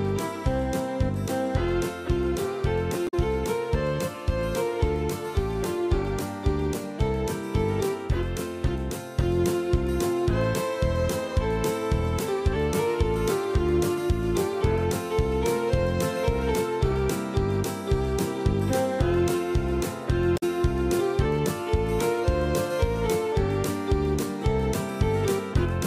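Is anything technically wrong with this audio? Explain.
Yes. Damaged data in a compressed stream occurs twice, at 3.07 to 3.14 s and 20.36 to 20.43 s. Corrupted bytes make the decoder misread frames and lose sync until it finds the next frame header. Each event is a short chirp, squawk, click or hole, about 70 ms long.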